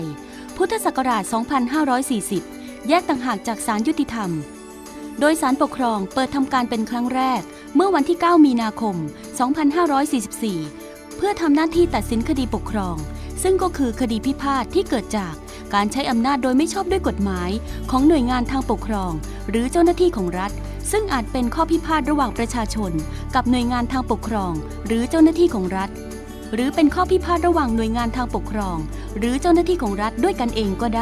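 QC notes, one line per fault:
Nothing here needed a note, so there's nothing to flag on this one.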